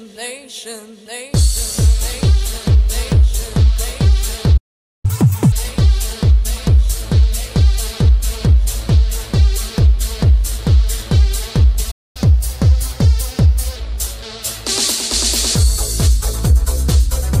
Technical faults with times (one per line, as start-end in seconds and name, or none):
4.57-5.05 playback stall
5.05-5.52 catch-up at higher speed
11.91-12.17 playback stall
12.17-13.76 catch-up at higher speed